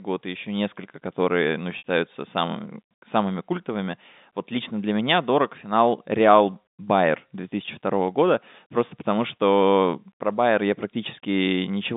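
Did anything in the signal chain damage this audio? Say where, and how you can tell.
Yes, at the network stage: packet loss with pitch repetition at 1.78 to 1.83 s, between "еще несколько которые ну" and "самыми самыми культовыми вот". About 60 ms went missing, which fits three 20 ms packets. The receiver looped the last pitch period, giving a brief held buzz. A spectrogram shows the harmonics frozen flat, and the waveform shows identical repeating cycles decaying.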